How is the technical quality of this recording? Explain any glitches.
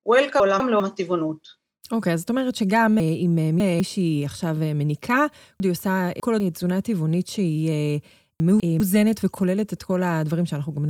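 The recording has four glitches where chunks of the speech play out of order. In each one a 200 ms chunk arrived late and played after the chunks that should have followed it.

At 0.4 to 0.8 s the chunk is one position late. The order is scrambled briefly.

At 3.0 to 3.8 s the chunk is three positions late. This gives a longer jumbled stretch.

At 5.6 to 6.4 s the chunk is again three positions late, producing the same garbled reordering.

At 8.4 to 8.8 s the chunk is one position late. There is a short swap of sound.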